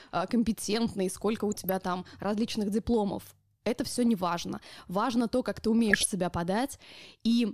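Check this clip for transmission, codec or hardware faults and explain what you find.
There's DAB burbling in three short bursts across the speech. The first runs 1.52 to 1.83 s, right after "а компетентный сколько у". The second is 3.90 to 4.06 s, before "не важно". The third is 5.79 to 6.06 s, after "то как ты". Weak reception lets bit errors, a fraction of a percent, slip past error correction into the MP2 data. Corrupted samples put short blips of noise in single sub-bands, and corrupted scale factors make sub-bands jump in level for up to a frame, so you hear burbling noise over the speech.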